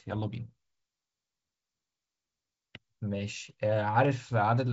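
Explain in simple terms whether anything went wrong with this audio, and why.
Nothing went wrong here: the speech has passed through ordinary G.722 wideband telephone coding, which is working as intended and simply leaves nothing above roughly 7.7 kHz.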